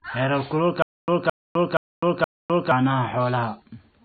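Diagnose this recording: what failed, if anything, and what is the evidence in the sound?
Codec stage: MP3 compression, likely at a low bitrate near 24 kbps. The spectrogram shows a hard ceiling at 4.6 kHz and flickering holes that sound watery.

Playback or stream stage: stutter with silent gaps from 0.82 to 2.71 s. The waveform shows a 216 ms burst repeating four times, every 473 ms, with flat digital silence between, likely from stalled retries.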